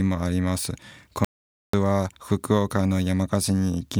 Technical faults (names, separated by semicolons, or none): audio dropout to silence